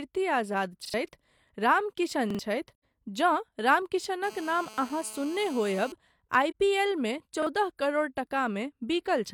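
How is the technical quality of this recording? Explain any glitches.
The speech in this recording is interrupted by three kinds of fault: repeated buffers, muted AAC frames and a GSM phone buzz.

Repeated buffer at 0.85–0.94 s, 2.30–2.39 s, 4.74–4.78 s and 7.42–7.47 s, the last just after "पी एलमे". Fresh audio arrived late, so the device replayed its last 43 ms block, which fits a 2048-sample buffer. It plays twice extra in the first two cases and once in the others. Each is a brief stutter with hard joins, and roughly 100 ms or 40 ms of speech goes missing.

AAC frame loss with muting at 2.75–2.83 s (85 ms) and 6.50–6.55 s (43 ms), the second just before "पी एलमे". The decoder zeroed the lost frames, and the overlapping windows fade the sound down and back up. The first is a soft-edged hole and the second a brief dip.

GSM phone buzz from 4.24 to 5.92 s. A nearby 2G phone on a call transmitted bursts about 217 times a second, and the audio circuitry rectified them. 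This gives a harsh, raspy, harmonic-rich 217 Hz buzz about 20 dB below the speech, nearly steady and unrelated to it.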